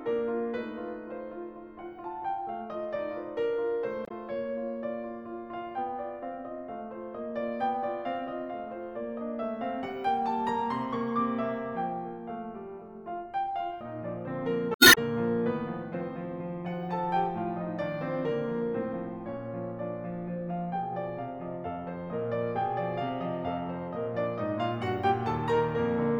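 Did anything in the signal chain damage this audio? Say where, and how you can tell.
Yes. Brief glitches at 4.04–4.11 s and 14.73–14.98 s point to damaged data in the compressed stream: corrupted frames made the codec's decoder lose sync.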